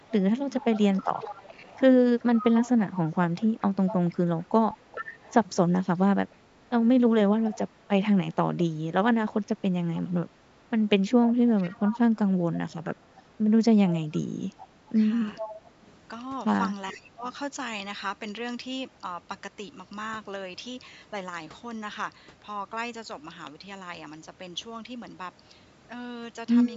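From 0.0 to 1.05 s the speech dips briefly, by around 5 dB for about a tenth of a second in total. This is likely speech suppressed in double talk, where the echo canceller ducks the talker while the far side also speaks. From 0.05 to 8.58 s, and again from 9.94 to 15.91 s, a faint copy of the speech trails 429 ms behind, about 15 dB down. That is likely an echo leak from a loudspeaker path the canceller did not fully clear. At 4.70 s a tiny 10 ms smear replaces the signal, which fits one lost LE Audio frame that the LC3 decoder concealed with noisy spectrum. Similar double-talk suppression recurs at 7.69 to 7.79 s (about 5 dB), 14.29 to 15.77 s (about 5 dB, around 0.2 s in total) and 16.93 to 17.25 s, where the drop deepens to about 15 dB.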